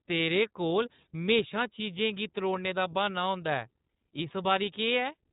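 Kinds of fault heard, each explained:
iLBC codec: the speech is squeezed into the narrowband VoIP coding of iLBC, with nothing above 3.8 kHz. Each 20 ms frame's excitation is coded on its own, which leaves a plainly audible rough, synthetic edge. That grain separates it from simple low-pass filtering, which would only dull the sound.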